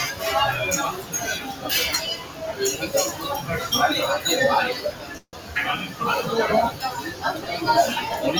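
Through the whole clip of everyday sound, a noise suppressor applied to music or sounds is at work. It was built for speech. Here it treats steady and sustained sound as noise and pulls it down. The level swings by about 10 dB as it acts. Sudden onsets mostly pass. Held sound and decays sink, so the audio pumps and thins.

The sound is cut by the noise suppressor at five points. The first runs from 0.92 to 1.15 s, with a drop of about 9 dB. The second runs from 1.39 to 1.66 s, at about 8 dB. The third is from 2.16 to 2.43 s, at about 9 dB. Each time a sustained or fading part is judged to be noise. Its level dips or its tail is cut short.

The longest cut runs from 4.76 to 5.56 s, with a drop of about 9 dB. Inside it, from 5.17 to 5.35 s, comes a call audio freeze. The last sound is carried on as a fading fill for 155 ms. About 50 ms of that is near silence. Then the audio resumes where it stopped. 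Nothing is lost, but everything after it now runs 155 ms late. The likely cause is delayed packets draining the jitter buffer.

A last suppressor cut falls between 7.07 and 7.24 s. It drops about 7 dB.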